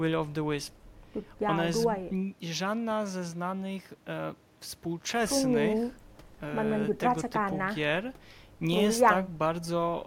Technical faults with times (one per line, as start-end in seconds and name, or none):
none